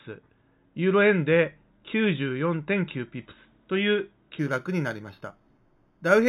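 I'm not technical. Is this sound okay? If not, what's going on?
No. From 4.39 s to the end, there's imaging from linear upsampling. Crude rate conversion dulls the speech and adds a faint metallic shimmer.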